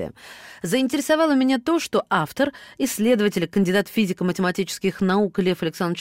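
No technical faults turn up anywhere in the recording, so there are none to describe.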